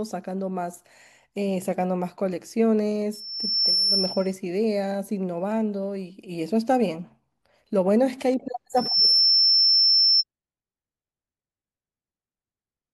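A microphone is picking up its own loudspeaker, and at 5.4 kHz the loop gain tops one, causing loudspeaker feedback squeal. A pure tone swells over most of a second from 3.13 to 4.33 s, then returns faster and louder, clearly above the speech, from 8.76 to 10.24 s.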